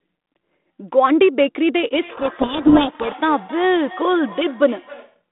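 At 1.92 s a feedback echo between two devices begins and runs to 5.24 s. A second device in the room replays the far side's audio, and this microphone captures it again. The sound returns about every 300 ms, thinner and ringing, peaking about 18 dB below the speech.

From 2.1 s to 3.15 s there is a codec payload misread. The G.726 code words arrive with their bit order reversed. The decoder still produces output, but it is the wrong sound. The speech sinks under harsh, grinding distortion until the packing matches again at 3.15 s.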